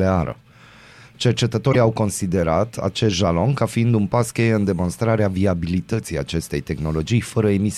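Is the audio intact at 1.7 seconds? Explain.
No. From about 1.69 to 1.75 s, just before "au considerat acest jalon", the speech is briefly disrupted. This is damaged data in a compressed stream: corrupted bytes in the stream caused the decoder to misread frames there, lose sync, and hunt for the next valid frame header. Unlike a dropout or packet-loss concealment, this comes from the decoder misreading the compressed data itself.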